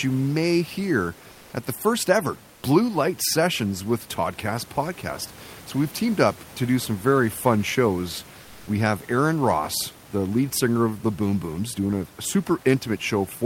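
From 2.55 to 2.63 s, after "at the first ever", the background turns flat, featureless and about 3 dB quieter: comfort noise, likely from discontinuous transmission filling the pause.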